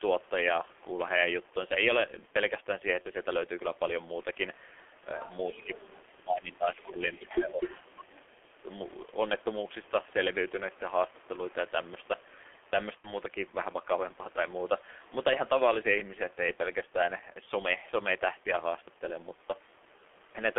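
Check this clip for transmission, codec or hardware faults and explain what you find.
Several faults are present: a low-bitrate codec colouring the whole speech clip, two short dropouts, two stretches of suppressed speech, and faint echoes.

G.723.1 codec, throughout: the sound is confined to roughly 300 Hz to 3.4 kHz and coded at about 6.3 kbit/s with heavy damage. Its slow, frame-based voice model leaves speech muffled and hoarse, with smeared consonants. Unlike a plain band-limit, it adds roughness, not just dullness.

VoIP packet loss concealed by the speech codec, at 3.02 to 3.06 s and 12.98 to 13.11 s: the decoder filled the gaps by extending its last pitch and filter while fading them. The first fits one lost 30 ms frame, the second two. Each gap sounds like a brief stretched, fading smear rather than clean silence, which sets it apart from a hard dropout.

Speech suppressed in double talk, at 5.54 to 7.02 s and 7.19 to 8.69 s: the level sinks by about 20 dB over roughly one and a half seconds each time, likely because an echo canceller turned down its own talker along with the loudspeaker echo while both sides were speaking. 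The dips during overlapping speech distinguish it from a steady level fault.

Echo leak, at 6.78 to 6.89 s and 7.09 to 7.29 s: a copy of the voice played on the loudspeaker side returns 351 ms late, about 25 dB below the speech, likely residue a loudspeaker-side echo canceller failed to remove. Its fixed delay marks it as echo, not reverberation.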